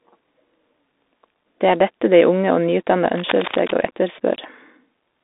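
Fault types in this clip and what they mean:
Bluetooth CVSD headset codec: The speech has been squeezed through the narrowband headset link, which codes each sample as a single up-or-down step whose size keeps adapting, which fits a 64 kbps CVSD stream. On a spectrogram everything sits in a band from about 250 Hz to 3.7 kHz, with an empty region above 3.8 kHz. The damage is plainly audible: sibilants turn scratchy, louder bright sounds smear, and a fine granular hiss runs under the whole clip.
Cable scratch noise: From 3.15 to 3.72 s, right after "og nyutdanna", a burst of rough, crackly rustling rides over the speech, roughly 10 dB below it. The likely cause is a worn cable or connector being moved, so that its contact resistance jumps about rapidly. The waveform shows a dense cluster of irregular spikes over that half second, and the spectrogram shows ragged broadband vertical streaks scattered across the band, unlike the smooth harmonic bands of speech.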